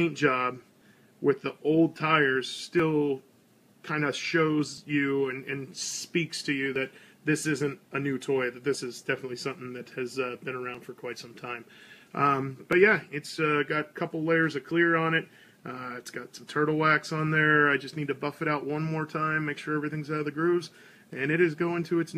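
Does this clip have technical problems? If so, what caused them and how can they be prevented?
Yes. Overlap between stream segments: adjacent 2-second segments carry overlapping time stamps, so the player trims 5 to 13 ms of sound, leaving tiny skips at 2.80, 4.78, 6.76, 8.74, 10.75 and 12.73 s. Prevent it by making the segmenter write contiguous, non-overlapping time stamps.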